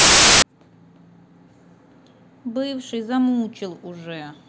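A speech recording opens with file tags played as audio: an embedded cover picture is read as samples, producing hard-edged, very loud white noise from 0.00 to 0.42 s.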